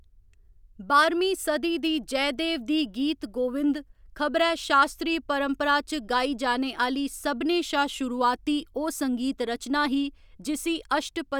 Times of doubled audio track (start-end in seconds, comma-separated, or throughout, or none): none